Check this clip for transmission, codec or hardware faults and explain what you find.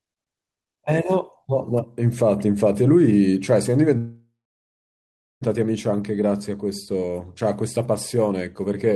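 One fault here. A call audio freeze runs from 3.97 to 5.43 s: the last sound fades out as a buzz or hiss, then goes silent for about 1.1 s. That's likely delayed packets draining the jitter buffer. The audio picks up where it stopped, with nothing lost, just pushed later.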